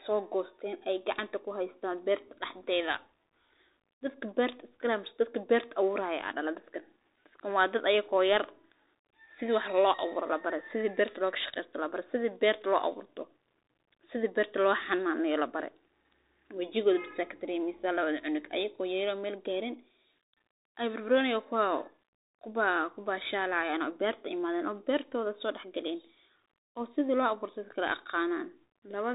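From start to finish the speech passes through a Bluetooth CVSD headset codec, which fits a 64 kbps stream. A spectrogram shows an empty band above 3.8 kHz. The one-bit step tracking overloads on loud, bright sounds, so s sounds turn scratchy over a granular hiss, visible as fuzzy waveform edges.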